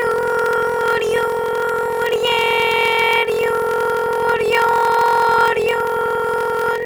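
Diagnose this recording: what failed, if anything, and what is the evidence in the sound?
At the driver or buffer stage there is a block size mismatch (padded). Each written block is shorter than the block read, and zeros fill the gap. Throughout, a 43.1 Hz buzz, fitting a 1024-sample read block, accompanies playback at 0.861 times speed with timbre essentially unchanged.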